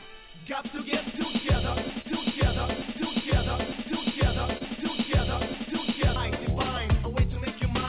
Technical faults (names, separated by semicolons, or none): clock drift between sender and receiver; broken-record loop; short stall from a late packet